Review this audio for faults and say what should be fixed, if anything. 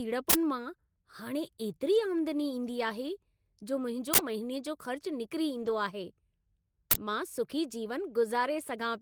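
Uninitialised buffer at 0.30–0.34 s, 4.14–4.18 s and 6.91–6.96 s. Each is a short, loud burst of digital noise. Each lasts about 43 ms, which fits a 2048-sample buffer. The block was sent to the output before any audio was written into it. Whatever was left in that memory played as samples. Zero-fill every buffer on allocation, and only queue it for playback once it has been written.

Lost packet rebuilt from error correction at 1.95–2.01 s and 5.57–5.71 s. There is no gap. Instead the speech turns rougher and noisier for about 40 ms, then about 80 ms. Those lengths point to two and four lost 20 ms packets. The decoder filled each loss with the low-bitrate copy carried in the next packet. Reduce packet loss on the network path, for example with a larger jitter buffer and a less congested route.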